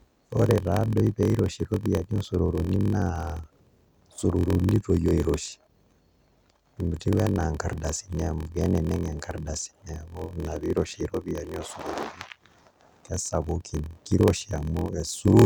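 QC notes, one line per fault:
Throughout, block size mismatch (padded): there's a steady buzz at about 43.1 Hz running under the speech, and everything drags a little, playing at 0.938 times normal speed while the pitch stays about where it should be. One stage is writing shorter blocks than the next one reads, which fits a 1024-sample read, and the leftover in each block gets zero-filled. That tiny silent gap every block is the buzz, and the added gaps stretch the timing.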